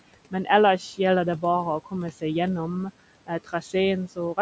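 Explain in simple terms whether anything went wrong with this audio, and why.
The call's noise suppressor kept turning the background down frame by frame, so throughout the clip the room noise sinks between words and swells back underneath them. These are noise suppressor artifacts.

Between 3.27 and 3.74 s, the same suppressor mistook some speech for noise. About a sixth of a second of quiet sounds was lowered along with the background, so they come out faint and swallowed. This is speech cut by the noise suppressor.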